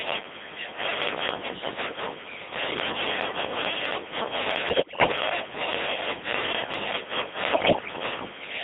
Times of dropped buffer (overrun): none

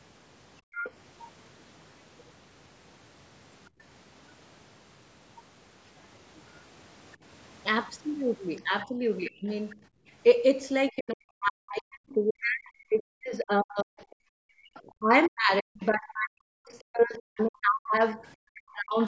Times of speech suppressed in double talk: 8.86-19.00

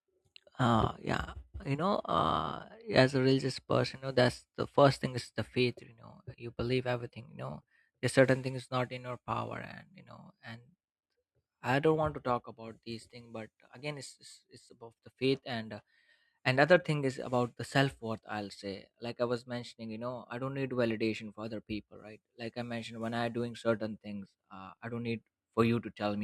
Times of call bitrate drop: none

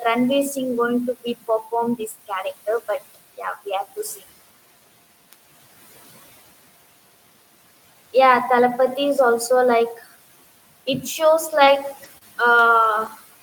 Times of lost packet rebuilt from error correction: 11.47-11.68, 12.04, 12.83-13.07

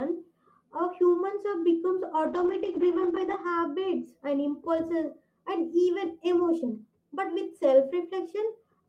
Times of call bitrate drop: 2.26-4.11

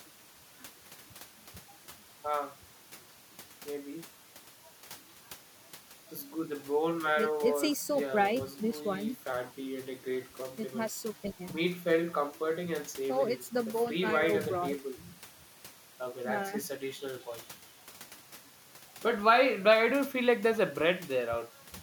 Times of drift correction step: 9.33-10.41, 14.78-15.72

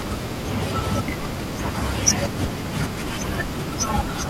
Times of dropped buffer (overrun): 0.82, 1.86

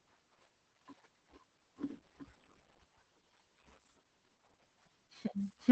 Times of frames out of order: none

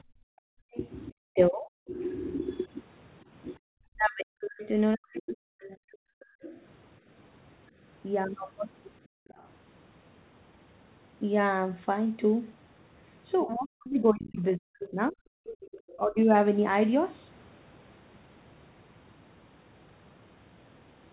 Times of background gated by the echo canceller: 0.03-3.64, 9.06-9.28, 15.45-15.61

